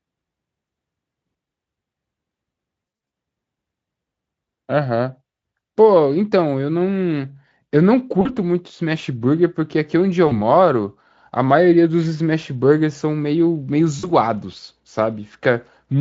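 At 2.87 to 3.11 s, VoIP packet loss concealed by the speech codec: about 160 ms of speech goes missing in scattered gaps (longest 60 ms), and the decoder extrapolates each into a buzzy tone or coloured noise that fades. Shorter 40 ms dropouts recur at 8.21, 10.27 and 13.99 s.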